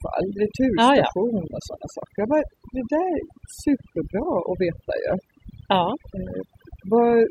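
A speech recording with overdone noise removal throughout: the denoiser's gating bands near its noise estimate, so the background goes twinkly-silent.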